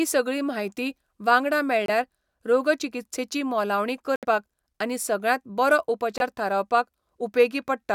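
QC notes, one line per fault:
1.86–1.90 s, Bluetooth dropout: a late packet was likely discarded on the wireless link, leaving a 23 ms silent hole after "सगळी म्हायती वांगडा". The sound resumes mid-flow before "रोगचिकित्सेची मोलावणी", as if it had played on.
4.16–4.25 s, Bluetooth dropout: a short burst of packets, likely three, missed their deadline and were dropped, cutting about 70 ms of sound after "रोगचिकित्सेची मोलावणी". Playback picks up again before "आनी सगळ्यांत".
6.18–6.22 s, Bluetooth dropout: a single packet likely failed to arrive in time, so the output fell silent for 23 ms. The sound returns mid-stream, skipping what would have played.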